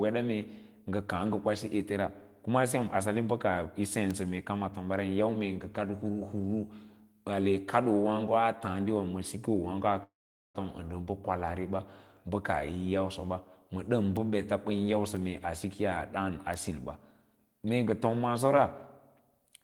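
At 4.11 s a bit error spike appears: a single flipped bit throws two consecutive samples far from their true value before they snap back. It is one hard, bright tick spread across the whole spectrum, with no link to the surrounding speech. Unlike a dropout click, nothing goes missing around it. The same kind of tick returns, single-sample this time, at 14.17 s, 15.17 s and 16.54 s.

From 10.03 s to 10.58 s comes a call audio freeze, most likely caused by packets held up in transit until the jitter buffer ran dry. The receiver stretches the last sound into a short buzzing tail that dies to silence for about 430 ms, about 0.5 s of fill in all. When the stream resumes, it picks up exactly where it stopped. Nothing is skipped, unlike packet loss concealment, but everything afterwards arrives about half a second later.

Between 15.65 s and 16.31 s there is a jitter buffer speed-up. With a backlog to clear, the receiver trims repeated pitch-period-sized slices, around 50 ms in total, so the speech runs at about 107% of normal pace. 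It sounds slightly hurried. Because only whole pitch cycles are dropped, the voice keeps its pitch, which separates this from a simple playback-rate error that would raise it.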